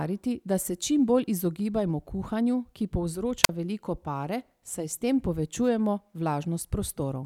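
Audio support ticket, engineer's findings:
Wireless microphone squelch dropout in speech, 3.43–3.49 s, after "bolj izogibajmo kuhanju ki", before "veliko pare saj s". Brief hiss rise, then a roughly 42 ms near-silent hole. RF fade triggers receiver squelch. Spectrogram: broadband noise smear, then blank vertical gap.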